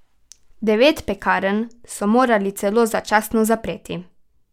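No technical faults are audible anywhere in the speech.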